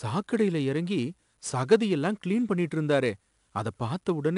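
A speech recording with a gritty hiss riding on every louder passage from start to finish, plus roughness on sharp onsets and nothing above 10.6 kHz. That is 4-bit ADPCM compression, with coarse predicted steps adding level-following noise, consistent with a stream around 88 kbps.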